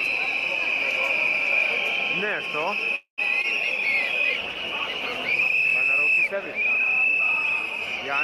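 At 2.95 to 3.20 s there's a call audio freeze: the sound stalls into a fading buzz or hiss, then about 100 ms of silence. Likely delayed packets draining the jitter buffer, so nothing's lost, just a 0.22 s gap. Then around 3.42 s comes short concealed packet loss, about 20 ms missing and 17 ms patched over by the decoder, heard as a quick smear. From 3.58 s to the end there's a call bitrate drop, from 96 to 23 kbps, bottoming out for about 3.2 s, so everything turns coarse, watery or duller up top.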